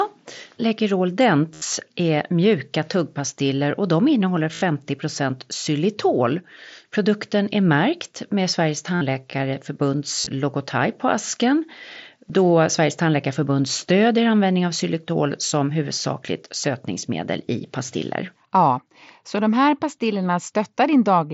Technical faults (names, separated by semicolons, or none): concealed Bluetooth headset packet loss